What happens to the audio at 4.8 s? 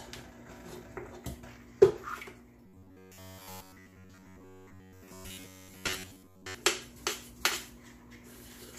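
Robotic sound from repeated short buffers spans 2.66–6.56 s: a rigid metallic buzz near 93.8 Hz, likely from roughly 10.7 ms repeats, visible as evenly spaced spectrogram harmonics.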